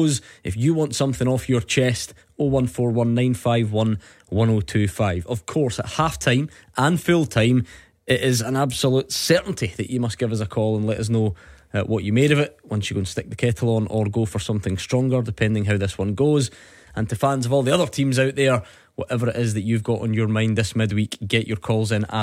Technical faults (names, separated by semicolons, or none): none